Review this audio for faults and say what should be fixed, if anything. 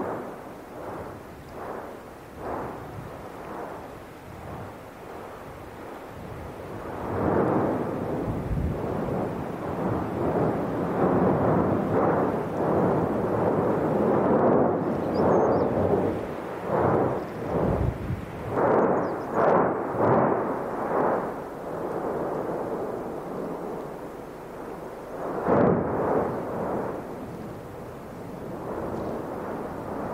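Nothing stood out on listening, so there is nothing here that needs fixing.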